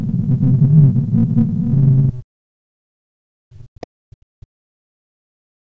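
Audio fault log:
0.0–0.4 s, 1.02–1.1 s and 1.29–1.56 s: other side's voice leaking through. A second, fainter voice sits under the speech in three short scraps. It runs around 20 to 25 dB below the main talker. The far end is likely playing on a loudspeaker near the microphone. The echo canceller did not strip all of it out, so fragments slip into the send path.
0.22–2.52 s and 2.92–5.67 s: speech suppressed in double talk. The talker's voice dips and drops out in pieces across both stretches, about five seconds in all. At its deepest the level falls by around 40 dB, close to silence. The cause is likely both sides talking at once. The echo canceller could not tell the local voice from the loudspeaker echo. It turned everything down together.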